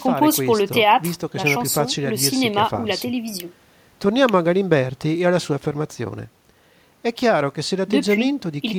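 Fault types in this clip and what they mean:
No technical faults turn up anywhere in this speech clip. There is nothing here that needs a name or an explanation.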